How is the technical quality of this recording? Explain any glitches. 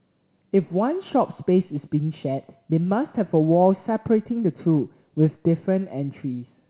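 No glitches are audible in this speech, and its content stops at 4 kHz, the narrow telephone band you would expect from a call path using G.711 mu-law coding at 64 kbps.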